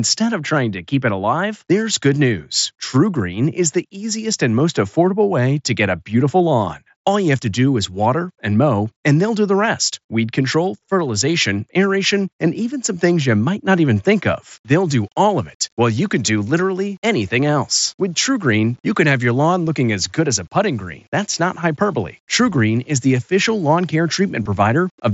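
At 11.0 s, right after "the rest weed control", there's a tiny concealed Bluetooth headset packet loss: a dropped packet of about 7.5 ms that the phone papered over by repeating a short matching chunk of recent waveform, so it's nearly invisible. The same thing happens at 12.85 s between "aeration and even" and "things you might not", this time 15 ms, and again from 24.43 to 24.46 s with 22.5 ms missing, where the patched span gets long enough to bring out a buzzy tone held at full level.

From 14.53 s, after "might not even think", to the end, the audio turns gritty in a way that tracks the speech, with quiet tails breaking up into coarse grain. That's most likely low bit depth without dither: the samples were rounded to a small number of levels, which fits about 9 bits, leaving error roughly 40 dB below the signal that rises and falls with the speech rather than sitting as steady hiss. 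All of this rides on top of the wideband mSBC headset link, whose upper limit sits around 8 kHz.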